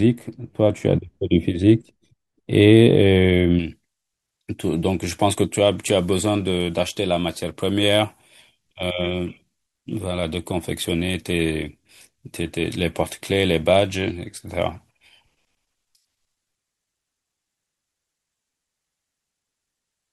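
Pre-emphasis left on, from 3.59 s to the end of the speech: the treble was lifted along a J.17 curve for transmission, and the matching de-emphasis that should undo it was never applied. The high end stays boosted, about 11 dB stronger at 10 kHz than at 1 kHz, so from that point the speech turns thin and glassy, with sibilants hissing and a brittle edge sitting over the body of the sound.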